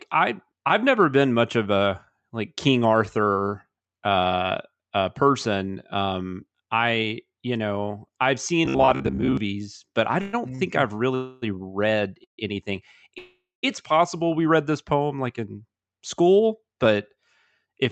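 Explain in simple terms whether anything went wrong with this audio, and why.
Several things went wrong on the way this call audio travelled, all from about the middle of the speech onward.

Robotic sound from repeated short buffers, 8.65 to 9.37 s: new audio was likely arriving too seldom, so the software kept replaying a tiny scrap of what it already had instead of waiting. About half of this stretch is those repeats. Replaying the same scrap over and over stamps a fixed buzz of about 66.7 Hz onto the speech, which fits a scrap roughly 15 ms long. The speaker turns metallic and machine-like, following the original speech only roughly.

Call audio freeze, at 10.21 to 10.35 s, 11.15 to 11.44 s, 12.24 to 12.40 s and 13.18 to 13.65 s: the data was likely held up in transit, and the receiver's waiting store ran empty. While it waited, it stretched the last sound into a fading buzz. In the two later freezes that fades into real quiet, about 0.12 s and then 0.19 s. 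The hold-ups last 0.12, 0.27, 0.14 and 0.45 s. When the data arrived, the speech picked up exactly where it had stopped. Nothing is lost, but each freeze pushes everything after it later.

Short stall from a late packet, 10.55 to 10.61 s: one small piece of data came in late, and the receiver briefly had nothing new to play. It held the last sound for about 38 ms until that piece arrived, then carried on from the same spot. Nothing is missing, but one sound hangs on slightly too long, with a faint buzz or dip.

Jitter buffer speed-up, 16.26 to 17.17 s: the receiver had built up a backlog of waiting audio. To catch back up to live, it kept snipping out tiny slices, about a tenth of a second in total. The speech plays at about 110% speed with its pitch unchanged, so the talker sounds a little rushed just there.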